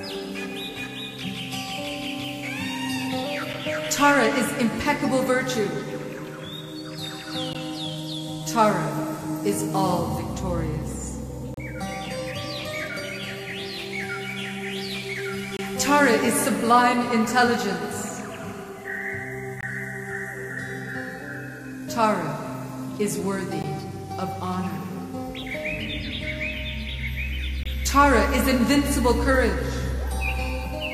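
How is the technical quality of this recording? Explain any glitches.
The recording has one recurring flaw, a gap between stream segments, at 3.53, 7.53, 11.54–11.57, 15.57–15.59, 19.61–19.63, 23.62 and 27.63–27.66 s. Roughly every 4 s, mismatched segment timestamps leave a hard-edged silent hole of 6 to 32 ms. Unlike a dropout, no audio is missing; the sound simply resumes late.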